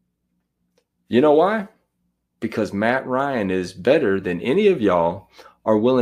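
No technical faults can be heard anywhere in this speech recording.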